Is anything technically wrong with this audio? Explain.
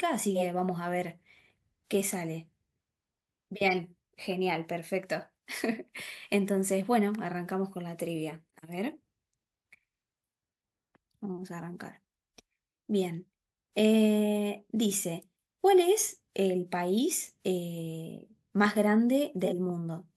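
Yes. Three kinds of fault are audible in this speech clip.

Corrupt frame decoded, at 0.35–0.42 s, 3.65–3.78 s and 19.44–19.53 s: damaged bits in compressed frames were decoded anyway, pushing energy into the wrong frequencies. Each spans one to a few frames and is heard as a chirp, squeak, blip or burst of noise peaking at around -15 dBFS.

Compressed frames skipped, at 8.43–8.54 s: whole frames never reached the output, so the audio jumps ahead by about 50 ms.

Loud pop, at 18.65–18.67 s: a single sharp pop sits on top of the speech, peaking roughly 5 dB above it, while the speech continues underneath. This is likely a sudden voltage step or pulse, such as a plug, switch or static discharge, entering the signal chain.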